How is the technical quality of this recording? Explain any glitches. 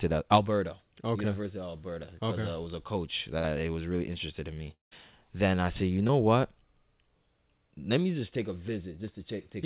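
The recording has narrowband telephone quality with three audible interruptions. Nothing reaches above 4 kHz, which fits a G.711 call path and gives the dull, band-limited tone of an ordinary phone line.

From 3.38 to 3.46 s there is a burst of packet loss. The sound briefly freezes into a held, fading tail, then jumps ahead. About 60 ms of audio never arrived. The receiver extended the last sound and faded it down to cover the hole.

From 4.74 to 4.93 s the sound smears into a short fading tail and then goes silent before picking up further on. This is likely a long network dropout. About 180 ms was lost, and after the concealment faded out, roughly 140 ms was left as silence.

From 6.07 to 6.11 s there is a brief smear or wobble where short concealed packet loss occurred. About 20 ms failed to reach the decoder in time. The receiver continued the preceding sound to fill the gap and blended it back into the real audio.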